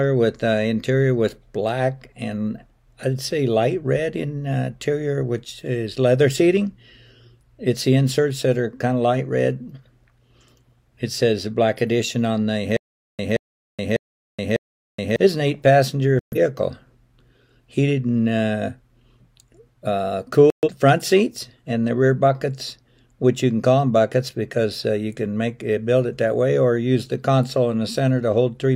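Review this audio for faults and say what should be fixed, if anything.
A stutter with silent gaps runs from 12.77 to 15.16 s. A 176 ms burst repeats four times, every 599 ms, with 423 ms of silence between. The likely cause is a stalled stream replaying its last fragment. Larger playback buffering would prevent it.

Digital broadcast dropouts mute the sound from 16.19 to 16.37 s and from 20.50 to 20.69 s. Each fits three corrupted frames being discarded. Stronger reception or error correction would prevent them.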